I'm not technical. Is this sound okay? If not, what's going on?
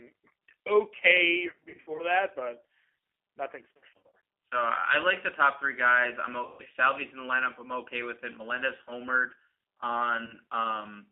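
No. Throughout, the speech sounds thin, muffled and slightly rough or robotic, like an old phone call. This is the G.729 codec, a phone-call compression scheme that rebuilds the voice from a simplified model and discards all the crisp, high-pitched detail.

In four places the voice briefly turns buzzy, smeared or fades out: from 1.5 to 2.05 seconds, just before "that but"; from 3.75 to 4.15 seconds; from 6.46 to 6.62 seconds, right after "top three guys I'm"; and very briefly around 10.25 to 10.35 seconds. This is VoIP packet loss concealed by the speech codec. Pieces of the call went missing, and the decoder guessed at them by stretching out the last sound it had, so the voice stays weak for a moment afterwards.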